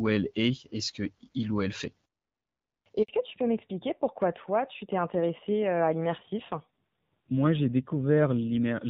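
At 3.02 s the speech drops out completely for about 60 ms, fading within a few tens of milliseconds into dead silence until 3.08 s. This is a handover gap: the phone switched the call from one network to another, and no speech frames arrived while the new link was being set up. Whatever was said in that brief window is missing, leaving a small hole in the speech.

From 3.08 s to the end, the speech is duller and rougher than before, with all content above 4 kHz gone. This is a fallback to narrowband. Before the handover, the call was carried by the AMR wideband (HD Voice) codec, sounding clear at a rate that fits 12.65 kbit/s. Afterwards, the call continues on an older narrowband codec, with a coarser texture that fits AMR-NB at around 7.4 kbit/s. Losing the upper band removes sibilance and crispness, so consonants become less distinct.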